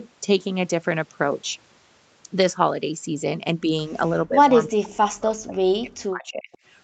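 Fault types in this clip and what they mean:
Speech suppressed in double talk: From 4.12 to 6.5 s the speech repeatedly sinks and breaks apart, adding up to around two seconds of damage, with the deepest dips falling about 40 dB. The likely cause is an echo canceller that, faced with both ends talking at once, could not tell the near talker from loudspeaker echo and attenuated everything. A waveform shows the envelope collapsing in chunks, and a spectrogram shows energy thinning or vanishing in patches.
Echo leak: At 6.52 to 6.58 s a brief, faint repeat of earlier speech surfaces, delayed by 336 ms and sitting about 35 dB under the direct speech. It is likely residual loudspeaker sound that the far end's canceller failed to remove before sending it back. On a spectrogram it appears as a weak smear echoing an earlier pattern within the 8 kHz band, and on a waveform it is only a tiny low-level ripple.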